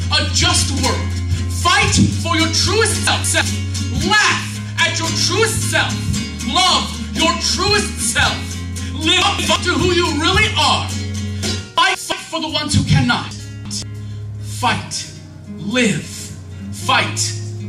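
Chunks out of order occur at 3.07–3.41 s, 9.22–9.56 s, 11.78–12.12 s and 13.31–13.82 s. Each time, a segment of about 171 ms plays one chunk late (two chunks late at 13.31 s). Nothing is lost, but the sequence is jumbled across three hard joins.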